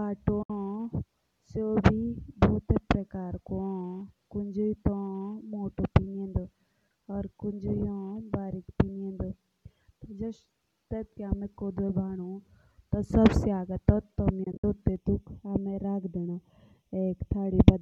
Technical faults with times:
0.42-0.50 AAC frame loss with muting
14.44-14.64 AAC frame loss with muting
14.96-17.82 channel delay (comb filtering)

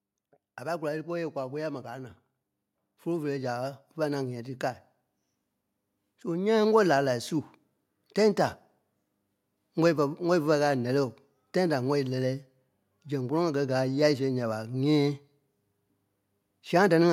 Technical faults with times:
0.58-4.59 automatic gain rising

